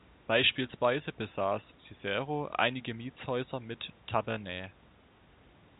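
Nothing goes wrong anywhere in this speech clip: it's narrowband call audio, with nothing above 4 kHz from the G.711 A-law path at 64 kbps, and the room noise sits about 31 dB under the speech.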